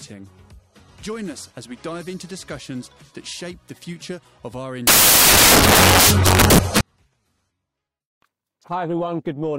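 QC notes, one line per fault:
4.87–6.81 s, samples built from the wrong bytes: misaligned byte assembly turns low bits into loud broadband noise, a full-band spectrogram block and a dense waveform.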